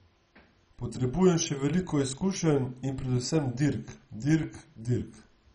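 Throughout, the speech sounds dull and gurgling, with a granular roughness and nothing above about 10.3 kHz. This is likely MP2 compression starved of bits, consistent with roughly 32 kbps, switching off upper sub-bands and coarsely quantising those remaining.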